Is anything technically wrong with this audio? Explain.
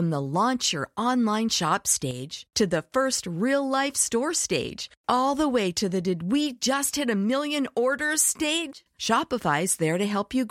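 Yes: two sudden gain jumps. From 2.11 to 2.50 s, after "launch your online shop" and before "to the first real", the sound drops about 6 dB, and from 8.73 to 8.86 s, after "hit a million orders", it drops about 19 dB. Speech and background noise fall together, likely because a gain change was applied between samples without a ramp. The waveform shows a stepped envelope, and the spectrogram shows an abrupt darkened band across all frequencies.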